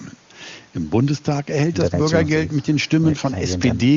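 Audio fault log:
No faults heard in this speech; the AMR wideband (HD Voice) coding sounds consistent with one of its upper rates, where any roughness stays faint at most.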